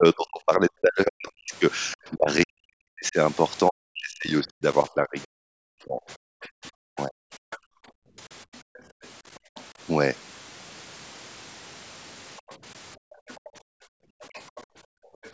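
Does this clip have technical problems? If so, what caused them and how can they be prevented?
Yes. Speech suppressed in double talk runs from 0.0 to 7.15 s, and the voice repeatedly dips or breaks away for roughly five seconds in total, sinking by something like 40 dB at its worst. A shorter dip of around 25 dB comes at 14.28 to 14.36 s. The likely cause is that both ends were talking while the echo canceller, unable to tell the near talker from loudspeaker echo, attenuated everything. A headset and a canceller with better double-talk detection would prevent this.

The other side's voice leaking through shows up as faint second-voice fragments at 1.28 to 1.96 s, 8.54 to 9.64 s and 12.37 to 15.31 s, roughly 30 dB under the speech, plus a brief, louder scrap of about 20 dB below at 7.51 to 7.58 s. It is likely residual loudspeaker echo that the canceller failed to subtract from the microphone signal. 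Lower speaker volume or headphones would stop it reaching the microphone.

Background gated by the echo canceller occurs at 7.43 to 9.55 s and 12.97 to 15.23 s. The room tone drops by about 40 dB for roughly a second within each span, then returns as the canceller releases its hold on the microphone during loudspeaker playback. A gentler residual-echo suppressor, or comfort-noise fill, would keep the background steady.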